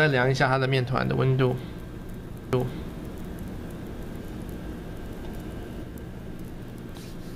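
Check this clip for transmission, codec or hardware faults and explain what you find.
One fault: a doubled audio track from 2.53 s to 5.83 s. A second full-band copy, about as loud as the original, trails it by roughly one second, likely from an extra, slower capture path. Unlike an echo, the copy has no decay or room colour, and it cuts in and out abruptly.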